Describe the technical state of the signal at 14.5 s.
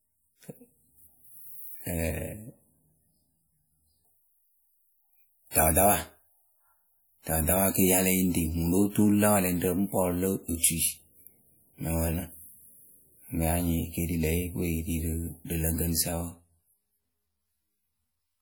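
At 14.5 s the speech carries the same damage it has through the whole clip, and it's plainly audible: a ringing, washy quality with a hiss that swells and fades along with the signal. That's most likely WMA compression. A transform codec with long blocks smears its quantisation noise over tens of milliseconds and drops weak spectral lines. The damage fits a stream around 48 kbps, though the band still reaches about 20.1 kHz.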